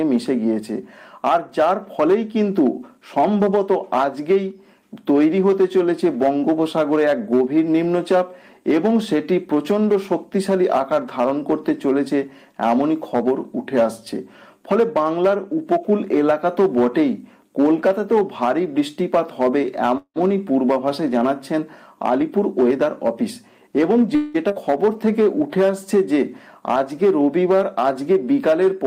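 Call audio freeze at 19.97 to 20.18 s: the sound stalls for about 180 ms. The receiver stretches the last sound into a fading buzz that drops to silence for its final 70 ms, then resumes exactly where it stopped. The likely cause is delayed packets draining the jitter buffer.

Jitter buffer speed-up from 22.04 to 23.23 s: playback runs at 109% speed with unchanged pitch, sounding hurried. The receiver trims repeated pitch-period-sized slices, roughly a tenth of a second in total, to shed excess buffered delay.

Call audio freeze again at 24.15 to 24.36 s: a fill of about 190 ms that decays without reaching silence. The audio then continues with nothing lost, adding that much delay.

Skip ahead at 24.48 to 24.51 s: roughly 100 ms of audio is discarded and playback jumps forward through a brief 10 ms join, so the material on either side is butted almost directly together.

Jitter buffer slow-down from 24.86 to 25.49 s: playback drops to 92% speed at the same pitch, with sounds drawn out. 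Repeated pitch periods add 53 ms, rebuilding the buffer's reserve.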